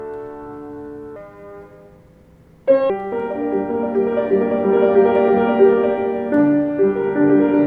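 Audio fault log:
1.16–2.90 s, wrong sample rate: the sound runs 1.38 times fast and about 5.5 semitones high, which fits 32 kHz material played back at 44.1 kHz without conversion.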